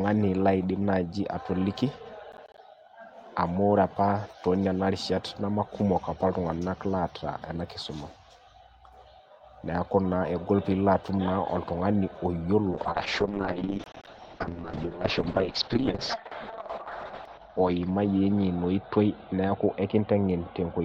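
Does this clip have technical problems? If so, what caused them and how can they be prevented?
Yes. From 2.32 to 2.58 s and again from 13.84 to 14.07 s, the speech is torn by a gritty processor overload crackle. It is a rapid run of tiny silent gaps, spaced in a way that fits missed buffers of around 10 ms, roughly seven in the first burst and about ten in the second. The hard-edged dropouts set it apart from random network packet loss. Preventing it means giving the audio thread real-time priority, enlarging the buffer, or reducing competing processor load.

From 12.73 s to the end, a call bitrate drop takes the Opus encoder from 40 down to 7 kbps, and the audio band narrows from about 20 kHz to 6 kHz, staying at its lowest for about 4.7 s. The speech turns coarse and watery as well as muffled, which distinguishes it from a simple low-pass filter that would dull the sound without adding grain. 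It can be prevented by securing more stable bandwidth or setting a higher minimum bitrate in the call's congestion control.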